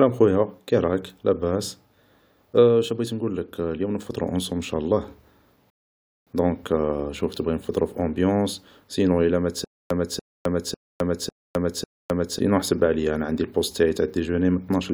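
A speech recording with two playback faults. From 5.70 to 6.27 s a rebuffering stall drops to silence for 567 ms, then resumes exactly where it stopped, so nothing is skipped. Between 9.64 and 12.39 s, a stutter with silent gaps repeats the same 289 ms burst five times, each followed by 260 ms of digital silence, a steady 549 ms cycle. This is likely a stalled stream replaying its last fragment at each retry. Unlike the stall, the audio due in that span is lost.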